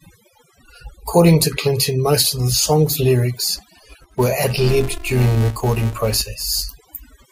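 Overdone noise removal runs through the whole speech clip: an aggressive noise reducer mutes bands near its noise estimate, leaving near-silence with twinkling specks. A filter restarted on every block appears from 3.54 to 6.21 s, just after "most of the song's". Each block starts from a fresh state with a small transient, producing a 345 Hz buzz that tracks the speech level, which fits a 128-sample block.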